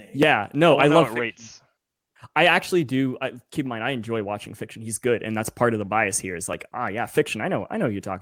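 A short recording of speech, with no technical fault to be heard in it. Nothing goes wrong at any point in the audio.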